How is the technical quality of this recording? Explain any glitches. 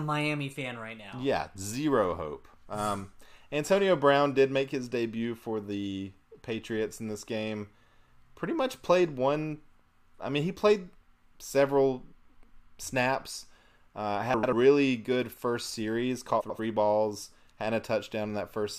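The recording has three brief glitches, all frames out of order. At 12.25–12.44 s after "mean he played several", 14.34–14.53 s after "snaps uh", and 16.40–16.60 s after "good first series", two adjacent chunks of about 93 ms each arrived in the wrong order and were decoded that way, so each stretch plays with its halves exchanged. This produces a garbled flutter. Unlike a dropout or skip, no time is lost and the surrounding timing stays intact.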